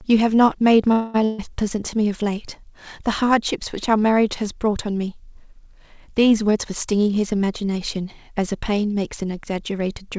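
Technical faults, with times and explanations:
0.92–1.16 s, call audio freeze: the last sound is stretched into a buzz or hiss that fades for about 220 ms, then the audio carries on where it stopped, with nothing lost. This is likely a packet delay that drained the jitter buffer. On a spectrogram the final harmonics smear horizontally and dim, with no true silence.
1.25–1.40 s, burst of packet loss: about 140 ms of audio is missing. The receiver extended the preceding sound as a held buzz or fading hiss, then jumped ahead. The waveform shows a repetitive, shrinking pattern, and the spectrogram shows flat, fading bands before an abrupt resumption.
6.45–7.98 s, jitter buffer speed-up: the audio runs about 15% fast at unchanged pitch and sounds hurried. Around a fifth of a second in total was trimmed as many short pitch-period cuts to reduce buffer delay. The spectrogram keeps its harmonic spacing, but the timing is compressed.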